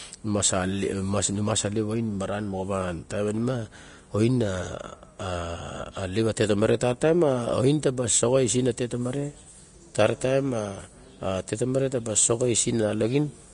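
Right from the start and through the whole speech clip, the top end simply stops at about 10.6 kHz, and what treble remains sounds hissy and grainy, with roughened tones and smeared consonant onsets. That's likely Vorbis compression at a low setting, consistent with something around 36 kbps.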